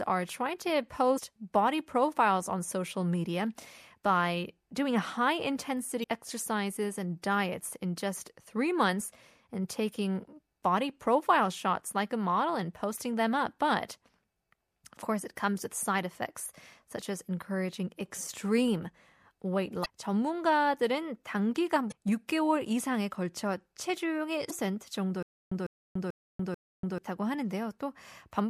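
Damaged data in a compressed stream produces brief glitches at 1.14–1.18, 6.00–6.04, 19.82–19.86, 21.88–21.93 and 24.47–24.51 s. Each time the decoder misreads corrupted frames and loses sync for about 45 ms. On a spectrogram each shows as a narrow vertical smear of broadband energy that breaks the speech harmonics.

From 25.23 to 26.98 s there is a stutter with silent gaps. A 150 ms fragment plays four times, each followed by 289 ms of digital silence, repeating every 439 ms. This is likely a stalled player retrying its last buffer. The waveform shows identical blocks separated by flat silent gaps.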